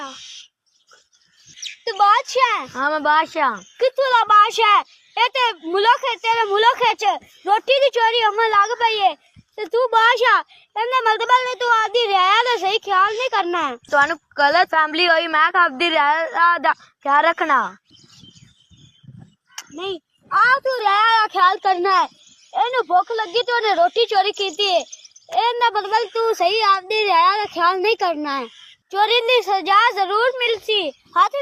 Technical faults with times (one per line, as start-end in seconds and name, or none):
none